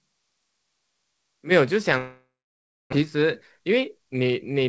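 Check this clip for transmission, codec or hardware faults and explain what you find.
Three faults are audible: a distant-microphone passage, a network dropout, and a jitter-buffer speed-up, all heard through a wideband call codec with nothing above 8 kHz, consistent with G.722.

From the start to 1.5 s the speech is roomy, hollow and thin, roughly 10 dB quieter with raised background noise, likely a switch to a distant microphone.

From 1.98 to 2.94 s a long network dropout likely occurred: the last sound is stretched into a fading buzz, then about 0.64 s of silence, with roughly 0.74 s of speech lost.

From 3.02 to 4.65 s a jitter buffer speed-up trims pitch periods to shed roughly 150 ms of delay, so speech runs 7% fast at unchanged pitch and sounds hurried.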